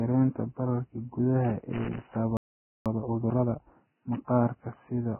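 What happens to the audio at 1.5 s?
At 1.5 s a loose connector crackle is underway, running from about 1.45 s to 2.16 s. A worn or dirty contact in the signal path is making and breaking as it shifts, so the signal is repeatedly interrupted and any DC on the line turns each break into a pop. For roughly 0.7 s the speech is broken up by an irregular burst of scratchy crackle that sits on top of it.

The crackle lands on speech that is already degraded by what is likely heavy Vorbis compression, the kind of damage that points to a very low bitrate of around 10 kbps. The encoder lowers its cut-off and quantises the remaining treble so coarsely that fine detail turns into noise of similar energy. The result is dull, band-limited speech with a hissy, grainy texture, roughened tones and smeared consonant attacks.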